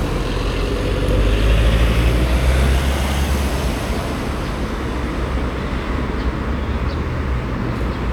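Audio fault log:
No faults are present in this recording of sounds.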